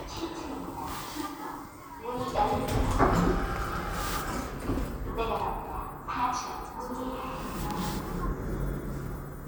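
No technical faults can be heard anywhere in this recording of sounds. There is nothing here to place on a timeline or trace to a cause.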